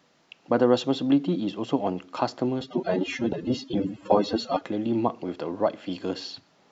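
From 2.61 s to 4.61 s the speech slips into an adaptive stream at a lower bitrate. Codec artefacts rise and the quality changes suddenly, with no gap at either edge, which fits the player dropping from roughly 96 kbit/s AAC to about 24 kbit/s, then recovering.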